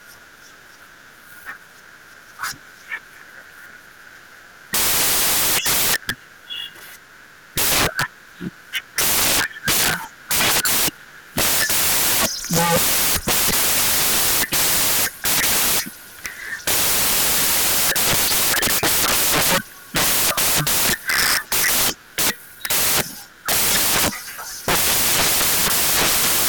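From start to end, samples built from the wrong bytes turn the speech into loud, harsh broadband noise: misassembled bytes promote the fast-changing low bits.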